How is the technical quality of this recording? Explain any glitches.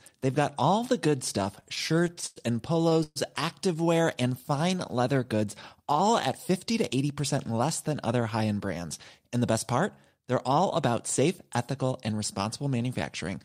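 The recording has several network-related glitches between about 1.5 and 6.1 seconds. All of them come from packets arriving unevenly at the receiver.

From 1.55 to 2.38 s there are repeated stalls (stutter). The jitter buffer ran dry 14 times and the receiver padded each gap by continuing the last sound, 228 ms in all, or about 28% of that stretch. The longest gap was 100 ms. The speech drags and judders. A spectrogram would show smeared, repeated harmonic slices, and the longer fills would appear on the waveform as tapering envelopes.

From 2.89 to 2.93 s a single short stall from a late packet held the sound for 18 ms until the packet arrived. It is heard as a slightly prolonged sound with a slight buzz or dip. On a spectrogram it shows as a brief horizontal stretch of frozen harmonics.

From 3.03 to 3.18 s there is a call audio freeze, likely caused by packets held up in transit. For 125 ms the last sound continues as a fading buzz or hiss, ending in about 20 ms of silence before the speech resumes. 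The waveform shows a decaying tail and then a flat line.

From 5.33 to 6.09 s a jitter buffer speed-up trims about a twentieth of a second of audio. The speech plays about 6% fast at an unchanged pitch and sounds slightly hurried. On the waveform the pitch cycles keep their spacing.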